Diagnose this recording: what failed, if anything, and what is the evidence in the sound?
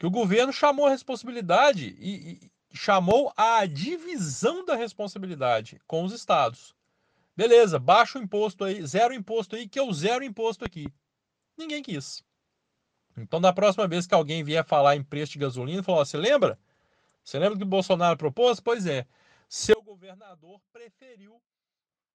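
A voltage transient most likely got into the analogue wiring, such as a plug being disturbed, a switch, or a static discharge, and the stages after it shaped it into a loud pop. The first pop, from 3.11 to 3.13 s, comes just before "a divisão da responsabilidade" and peaks about 10 dB above the speech. From 10.66 to 10.88 s, just after "que eu zero imposto", there is a double pop at a similar level. The speech continues underneath both.

An audio dropout to a faint residue starts at 19.74 s and lasts to the end. The wanted signal was most likely lost at a connection upstream, while everything after the break stayed powered and live. So instead of silence or a fade, the speech cuts off abruptly. What remains is a faint leak of the sound about 25 dB below its normal level, which is what a live path carrying only crosstalk or residual pickup produces.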